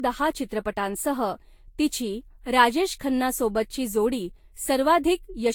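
A speech clip with generation loss throughout. The sound is swirly, smeared and hollow. Consonant attacks blur. Nothing sits above about 19.1 kHz. The damage is heavier than one encode at this quality would leave. It is likely the product of repeated lossy passes, around seven, each at a rate that sounds near 70 kbit/s and fits Vorbis. Each pass requantised on a shifted frame grid. Noise and spectral holes built up with every generation.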